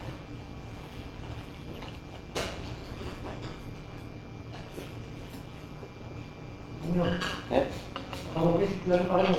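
Sound, reassembled from windowed frames whose overlap fails to sum to a steady gain, shows overlap-add ripple across the whole recording. The level dips and swells by about 11 dB once per frame, around 200 times a second, producing a metallic buzz with extra tones around each sound.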